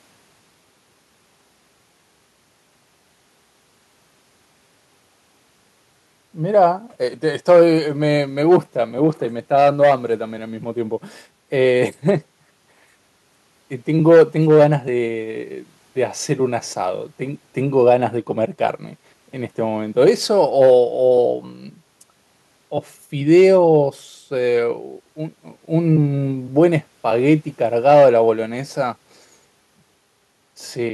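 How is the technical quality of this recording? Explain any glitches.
The technical quality of this recording holds up, and there are no glitches to explain.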